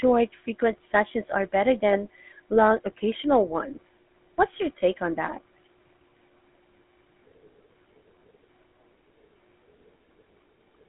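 Throughout, the speech carries plainly audible GSM full-rate codec damage. Pulse-driven vocal-tract coding makes it buzzy and gravelly, consistent with 13 kbps. Nothing passes below 250 Hz or above 3.4 kHz.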